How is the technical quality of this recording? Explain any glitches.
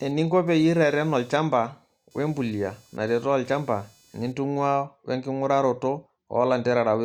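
The recording is marred by computer activity noise over the first part of the speech. From the start to about 4.7 s, a faint, rapid buzzing chirp sits under the speech, pulsing at roughly 500 times per second at around 35 dB below it, then stopping. It follows the machine's workload, not the speech: shifting processor, graphics or mouse activity disturbs the ground the audio circuit shares with the computer, and that ripple leaks into the recording.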